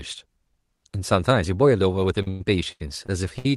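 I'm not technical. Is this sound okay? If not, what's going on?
No. From 2.22 to 3.46 s the speech has repeated stalls (stutter). Parts of the audio arrived over the network too late, so the playback briefly ran out five times. Each time, the receiver stretched the last bit of sound to cover the wait, about 0.3 s in total and up to about 0.1 s at once. Nothing is lost, but about a quarter of that stretch is filler, so it drags and stutters.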